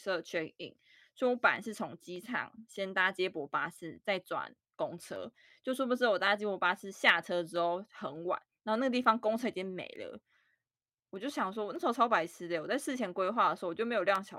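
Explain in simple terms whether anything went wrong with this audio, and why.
Something did go wrong. From about 0.36 s to 14.16 s, a click pops up every 0.6 s, roughly twenty times in all. That's clock drift buffer slips: two devices likely running slightly different clocks, so a handful of samples keep getting dropped or repeated.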